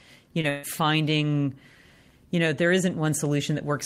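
At 0.41 s there is a short concealed packet loss: about 20 ms of the speech failed to arrive in time, and the receiver bridged the hole by extending the preceding sound for roughly 18 ms before blending back into the real signal. It is heard as a brief smear or wobble lasting until about 0.45 s.

From 0.49 s to 0.65 s comes a burst of packet loss, about 140 ms in total, too long for a clean patch. The receiver carried the last sound forward across the whole stretch, fading it as the gap lengthened, so the speech turns into a held buzz or a dying hiss with no silence in between. When the real audio returns, it picks up further along, and the 140 ms between is simply gone.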